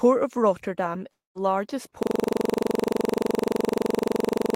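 At 1.11 s the speech breaks off until 1.37 s. The last sound smears into a fading buzz, then near silence follows. About 240 ms of audio never returns. This is likely a long network dropout, where packets stopped arriving and the receiver concealed the gap.

From 2.03 s to the end, a system hang loop takes over. One 42.67 ms slice repeats exactly, about 59 times. That fits a 2048-sample ring buffer cycling while the system froze. It sounds like a rough machine-gun stutter at 23.4 Hz.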